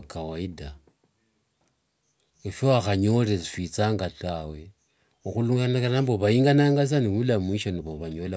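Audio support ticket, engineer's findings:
No technical faults found in the speech recording: signal path checks out with no dropouts, distortion, timing errors or level problems detected anywhere in the audio.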